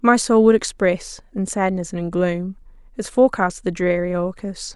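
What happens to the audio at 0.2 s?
Nothing goes wrong at 0.2 s; the speech there plays through intact, with no dropout, click, distortion or other fault.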